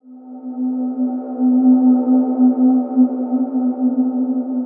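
No technical faults occur at any point in the clip.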